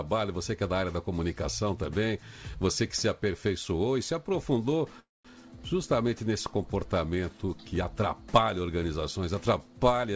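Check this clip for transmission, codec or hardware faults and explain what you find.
One fault: a call audio freeze from 5.00 to 5.27 s. The sound stops being fresh and continues as a short fading buzz that drops to near-silence for about 0.19 s. This is likely a jitter buffer that ran empty while packets were held up. Playback then resumes where it left off, so almost nothing is lost, but everything after is about 0.25 s later. The band-limited call path cuts off above 8 kHz, which fits G.722.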